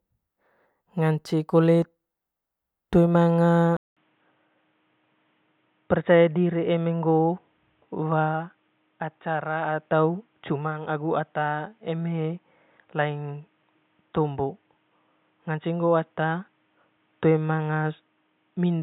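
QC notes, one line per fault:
3.77 s to end: input switched to a poorer device, likely; 200 ms gap, nothing above 3.8 kHz, about 5 dB quieter, new background noise, unlike filtering alone.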